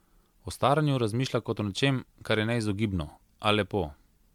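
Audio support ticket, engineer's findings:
Likely repeated MP3 decode/re-encode, around ten passes, sound consistent with a 128 kbit/s chain. Generation loss throughout: requantisation on shifting frame grids stacks noise and spectral holes. Swirly, hollow, smeared speech, blurred attacks, nothing above 19.9 kHz.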